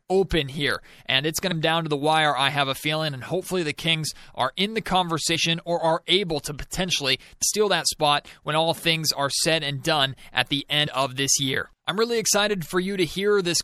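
From the start the speech sounds watery and swirly, with dulled treble and smeared consonants. This is MP3 compression, likely at a low bitrate around 64 kbps, where the encoder cuts the top end and lets weak frequency detail flicker in and out.

At 1.51 s, between "here and it's going" and "down to the wire", the speech jumps ahead with a brief smeared blip. Compressed frames were skipped, roughly 200 ms of audio, a whole number of MP3 frames of about 26 ms each. Shorter jumps of this kind follow at 5.35 s, between "are in the" and "or are able to" (roughly 70 ms lost), and at 10.86 s, between "and done at the" and "of this year I'm" (roughly 50 ms).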